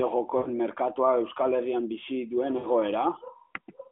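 Speech on a band-limited AMR narrowband mobile line smears, stretches and fades at 0.38–0.49 s and 2.58–2.66 s. These are lost AMR speech frames: the decoder reused its last good settings with falling gain over about 80 ms and 60 ms, consistent with four and three dropped 20 ms frames.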